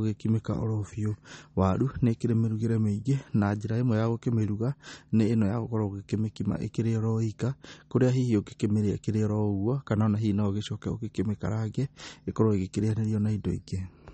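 Throughout the speech, the audio was likely squeezed through MP3 compression at a bitrate low enough that the encoder ran out of bits, which fits roughly 32 kbps. Starved for data, it drops everything above about 8.4 kHz and discards weaker frequency lines that flicker in and out between frames. The result is a dull top end with nothing above 8.4 kHz, a plainly audible watery, swirling texture, metallic chirps on s sounds, and blurred consonant onsets.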